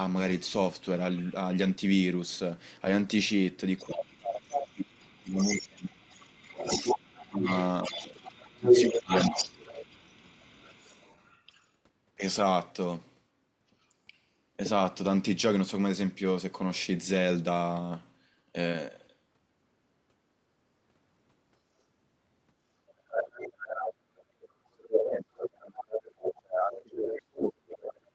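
Speech from a call, with nothing above 8 kHz, carries several faults. At 2.85 s a 20 ms stretch turns briefly rough and noisy without any gap: a lost packet rebuilt from error correction, where the decoder played the lower-quality copy carried in the next packet. A second voice seeps in from 3.78 to 3.84 s, faint and far below the talker, then returns nearly as loud as the talker from 4.97 to 11.41 s and from 22.88 to 27.52 s. This is the other side's voice leaking through, likely loudspeaker playback that the echo canceller did not fully remove from the microphone. During those overlaps the talker's own speech dips and breaks up, from 3.85 to 9.12 s (around 30 dB at its deepest, roughly four seconds affected in total) and from 24.58 s to the end (as much as about 40 dB). That is speech suppressed in double talk, likely the canceller turning everything down because it could not separate the talker from the echo. 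Between 22.59 and 22.73 s the room sound briefly sinks by about 11 dB and comes back. That is background gated by the echo canceller while the loudspeaker was playing.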